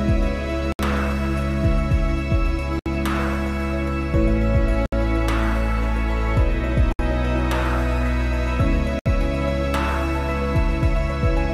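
Gaps at a join of encoded pieces open at 0.72, 2.79, 4.86, 6.93 and 8.99 s. Each is a silence of about 67 ms with edges smeared by the codec, and the gaps recur every 2 s. Separately encoded pieces were joined untrimmed, so encoder start delay and final-frame padding remain.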